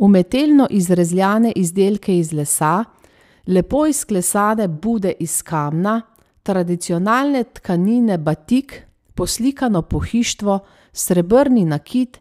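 No technical faults are audible.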